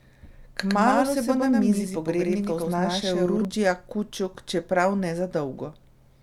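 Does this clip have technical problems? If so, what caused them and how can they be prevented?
Yes. From 0.69 s to 3.45 s the speech has a doubled audio track: a second full-band copy at about the same level trails the original by roughly a tenth of a second, then cuts in and out abruptly. Unlike room echo or reverb, the copy has no decay and no added room colour. The likely cause is the same signal arriving a second time through a slower capture path or an edit leaving two copies out of step. To prevent it, route each source through one path and check edits for stacked duplicate regions.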